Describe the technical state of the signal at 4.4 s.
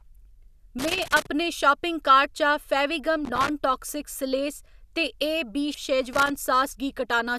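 At 4.4 s the speech signal is intact, with no technical fault present at that moment.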